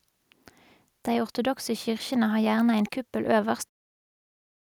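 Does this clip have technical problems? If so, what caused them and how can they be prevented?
No, there are no technical problems to report.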